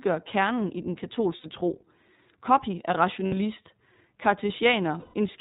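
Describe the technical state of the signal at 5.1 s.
At 5.1 s, packets of the iLBC codec stream are missing from 4.98 to 5.14 s, a 160 ms gap consistent with eight lost 20 ms frames. The decoder fills it by repeating the last pitch cycle mixed with noise, so the speech turns into a held, slightly buzzy, breathy vowel. Underneath, the iLBC codec itself, at 15.2 kbps, strips everything above 4 kHz and codes each frame independently, leaving plainly audible damage, the speech a little rough and synthetic.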